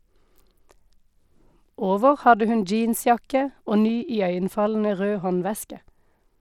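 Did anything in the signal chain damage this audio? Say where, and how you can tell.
Yes, at the codec stage, across the whole clip. The speech carries a gritty, grainy noise and a plainly rough, aliased edge from start to finish. The spectrum still runs up to about 21 kHz, so this is not a bandwidth cut. The likely cause is Bluetooth SBC compression at a rate that fits around 96 kbps. SBC splits the signal into a few wide sub-bands and allocates bits crudely, without a hearing model. At this rate the quantisation is coarse enough to hear as that grit throughout.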